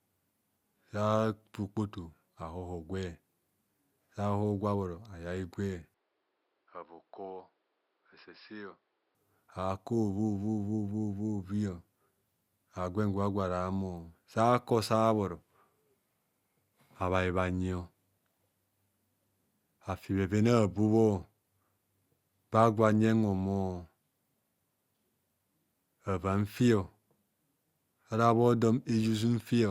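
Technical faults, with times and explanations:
5.94 to 9.15 s, input switched to a poorer device: the speech abruptly turns duller and about 10 dB quieter, losing everything above 5.4 kHz, with a new noise floor roughly 40 dB down and no gap at either switch, likely because recording moved to a narrower-band microphone or headset profile.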